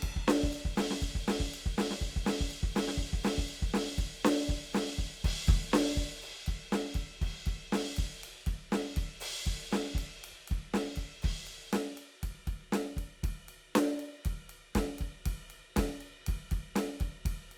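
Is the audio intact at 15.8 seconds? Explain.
Yes, the music plays through 15.8 seconds with no audible fault at that moment.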